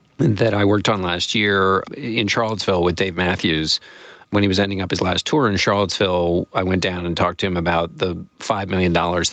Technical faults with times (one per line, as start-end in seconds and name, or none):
0.00-9.32 gain pumping